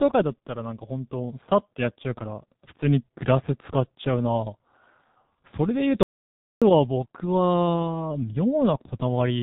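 From the first second the speech carries the sound of the G.723.1 codec, and the damage is heavy. Nothing survives above 3.8 kHz, so the voice is muffled and boxy. The codec rebuilds speech from a coarse vocal model refreshed in 30 ms frames, and at this degree of roughness the tone turns hoarse and consonants smear together, which fits a rate of about 6.3 kbit/s.

At 6.03 s the audio drops out to silence and stays there until 6.62 s, a gap of roughly 0.59 s. The signal falls to silence with no room tone underneath, then resumes mid-flow, and whatever was said in that span is lost. A silence of this kind most likely comes from the input being cut, through a momentary disconnect, link failure or mute, while recording continued.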